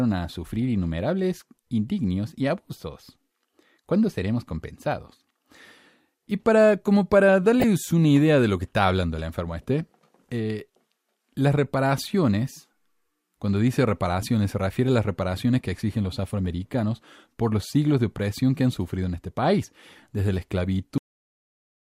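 DAB burbling at 0.58 to 0.65 s and again at 7.60 to 7.64 s: bit errors at a rate of a small fraction of a percent slipped past error correction into the MP2 data, and wrong samples put short blips of noise into single sub-bands. The speech briefly burbles, which fits a few damaged frames each time.

Cut-off end at 20.98 s: the final buffers were never played, so the speech stops mid-sound and falls straight to digital silence with no natural decay, leaving the last stretch of the clip empty.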